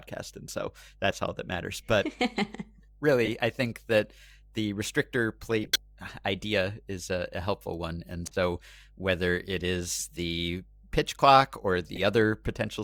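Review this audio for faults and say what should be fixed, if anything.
A ground loop or nearby transformer is coupling the 50 Hz power line into the signal, producing mains hum: a steady low tone with some low harmonics running under the whole recording, roughly 30 dB below the speech. Breaking the ground loop with a single-point ground or isolation transformer, and keeping mains wiring away from the audio path, would prevent it.

Damaged bits in compressed frames are reaching the decoder, which plays them anyway, so corrupt frames are decoded with energy misplaced in frequency. Each is heard as a short chirp or burst: 3.25–3.28 s, 5.63–5.80 s (after "think that the restrictor", before "idea is a a", the loudest), 8.27–8.36 s (before "whether it"), 9.99–10.04 s, and 11.95–11.99 s (after "the pitch clock or"). Checksums with concealment of failed frames, instead of decoding them, would prevent this.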